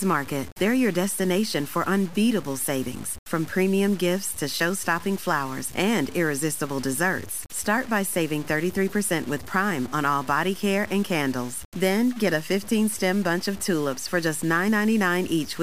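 From start to end, the speech carries a grainy distortion that moves with the signal. It sits roughly 20 dB below the speech. The likely cause is low bit depth without dither. The grain fits about 6 bits, with values truncated rather than rounded.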